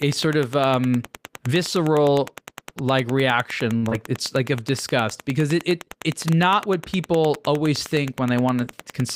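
Wi-Fi interference runs through the whole recording. A nearby radio's beacon, sent every 102.4 ms, is rectified by the audio circuit. It sounds like a steady tick about ten times a second, sitting roughly 20 dB under the speech.

At 3.77 to 3.85 s, just after "um visceral like reaction", comes a short stall from a late packet. The jitter buffer ran dry, so the receiver held the last sound for 52 ms. Nothing is lost, but the sound drags and buzzes briefly. The delay grows by 52 ms.

At 3.89 to 3.93 s comes short concealed packet loss. Audio arrived too late for the decoder. The receiver extended the previous sound for 27 ms and then blended back, but 40 ms of real audio is gone. It is heard as a quick smear.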